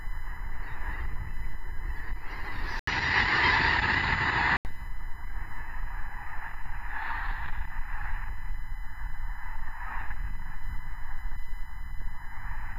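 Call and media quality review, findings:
USB whine, whole clip: steady fixed-pitch tone at 1 kHz, strongest harmonic at 2 kHz, roughly 25 dB under the sound. Probable component: USB audio interface power/ground. Mechanism: 1 ms bus frame current pulses coupling into the analogue path. Unlike mains hum, the pitch sits at 1 kHz multiples, not 50/60 Hz.

Input switched to a poorer device, 2.79 to 4.65 s: 80 ms dropout at the switch, then nothing above 7.6 kHz and a new noise floor around 45 dB down, with level unchanged. Likely cause: OS rerouting capture to a narrower-band mic or headset profile. Unlike a codec bandwidth drop, it brings a gap and a different background noise.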